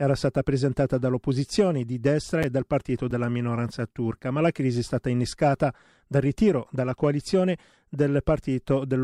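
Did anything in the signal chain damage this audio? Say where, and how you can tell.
Yes. Chunks out of order in the driver buffer cause jumbles at 2.43 s, before "e dal partito", and at 3.11 s. Each time, a 5.33 ms chunk plays one slot late.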